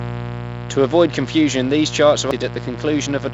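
Speech, carried over a call path whose band stops at 8 kHz (consistent with a G.722 wideband codec), with three technical faults. A mains buzz runs through the whole recording, a raspy tone built on 60 Hz and its harmonics sitting roughly 10 dB below the speech. It reaches well up the spectrum, which separates it from a plain hum: hum is a smooth, low sine, while this buzz comes from sharp switching spikes, typically from a dimmer, rectifier or unshielded cable, repeating twice every mains cycle. From 0.05 to 1.08 s, up to the words "confusion these charts", the automatic gain control is falling. It judged the input too loud or its background noise too strong and eased its gain down by about 6 dB, so the start is loud and then settles. Speech and buzz drop together over that second, which marks it as a gain stage acting on everything and not a speaker simply getting quieter or moving away. 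At 2.31 s, right after "confusion these charts", there is a CD skip: a tick with a mute only a few milliseconds long, after which playback resumes from another point on the disc. The jump in the material is what distinguishes it from a network dropout or a click. The sound doesn't just pause and pick up where it left off, it lands somewhere else, because the laser jumped to a different turn of the spiral.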